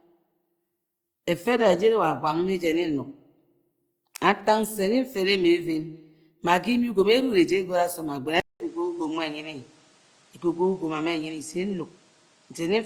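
Throughout the clip, the speech was likely passed through Opus compression in its CELT music mode, at a rate that points to around 24 kbps. The encoder keeps full bandwidth, with content reaching about 20.3 kHz, but it lacks the bits to code every band exactly and fills some of them by folding lower bands or inserting noise. The codec damage is plainly audible: voiced sounds take on a noisy, rough, grainy texture rather than clean tone.

At 8.40 s the input appears to switch to a poorer device, most likely another microphone or a headset's call profile, and it stays there to the end. A silence of about 200 ms marks the changeover. After the switch, nothing comes through above 10 kHz, so the upper band of the speech is gone. The new device also brings its own background noise, roughly 35 dB below the speech, while the level stays about the same.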